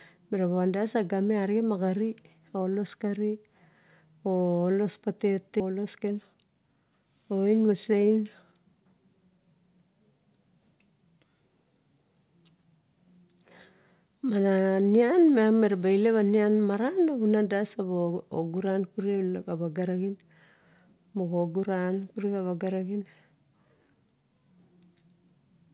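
A skip ahead at 5.6 s breaks this speech recording. About a second of audio vanishes, and playback leaps straight to later material with no gap or fill, so the two sides of the cut butt together. That pattern fits a receiver discarding a backlog of queued audio, or audio lost in transit, while newer audio was already waiting. Jitter buffer speed-up follows in two stretches: 5.7 to 6.77 s, running at 111% with roughly 150 ms trimmed, and 7.31 to 9.62 s, at 115% with about 400 ms removed. Here the receiver, still holding more delay than it wants, repeatedly snips out short pitch-period-sized slices. The result is hurried delivery without any pitch change. All of this sits on a call-codec path whose band stops at 4 kHz, which points to G.711 mu-law at 64 kbps.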